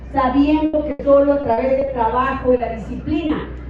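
At 0.65 to 0.75 s and again at 0.91 to 1.01 s, a burst of packet loss leaves roughly 80 ms each time undelivered. The receiver extends the preceding sound and lets it fade, producing a held buzz or hiss, after which the audio jumps ahead past the missing stretch.

From 1.41 to 1.89 s, repeated packet loss strikes four times, with the longest gap 40 ms and about a fifth of that span patched over. Each hole is filled before the next arrives, so the sound turns choppy and robotic.

At 2.57 to 2.61 s and 3.27 to 3.31 s, short concealed packet loss drops 20 ms each time. The decoder bridges these small holes by continuing the last sound and blending back, which can be heard as a brief smear or wobble.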